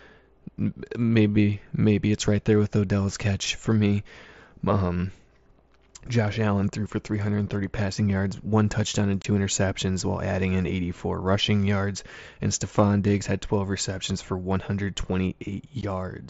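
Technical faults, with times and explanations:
9.22 to 9.25 s and 15.81 s, unconcealed Bluetooth headset packet loss: between "yards one touchdown and" and "interceptions while adding in", then again near the end, the speech drops out with hard-edged holes of about 22 and 15 ms. The gaps fit lost 7.5 ms mSBC frames between headset and phone, replaced by silence rather than concealment.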